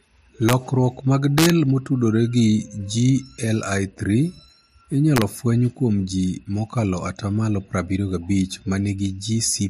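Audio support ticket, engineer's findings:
Integer overflow: violent cracks on speech peaks at 0.49–0.53 s, 1.38–1.50 s and 5.16–5.22 s, with about 1–2 dB overdrive. A fixed-point gain or summing stage is wrapping instead of saturating. The waveform shows peaks flipping full-scale to opposite sign, and the spectrogram shows full-band vertical streaks.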